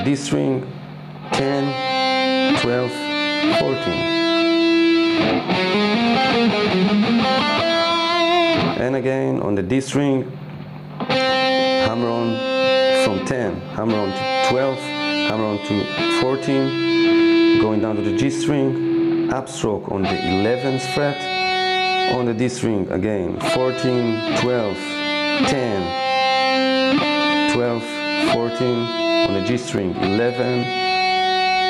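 Gain pumping runs through the whole clip. The level breathes constantly, with a swing in the region of 15 dB. Loud and quiet passages sit unnaturally close together, giving a flattened, squashed character. The likely cause is input gain set far too high for the microphone, with a fast limiter or compressor clamping down on each peak.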